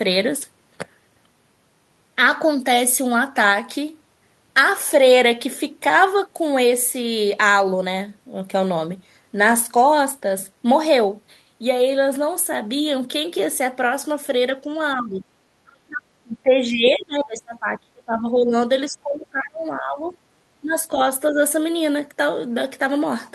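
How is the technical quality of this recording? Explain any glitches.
The recording has one recurring problem: the speech is repeatedly turned down in the second half. It sits on a call path whose top end stops near 12 kHz.

Speech suppressed in double talk occurs at 14.95–15.24 s, 15.63–18.53 s, 18.87–20.14 s, 20.61–20.75 s and 21.3–21.4 s. The level dips by about 10, 30, 20, 15 and 10 dB respectively, and the deepest dip lasts around three seconds. The likely cause is an echo canceller that couldn't separate this talker from far-end echo and attenuated everything. Unlike packet-loss dropouts, the voice dips in irregular stretches.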